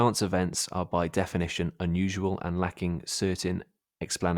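Nothing in the recording stood out as a technical fault on listening.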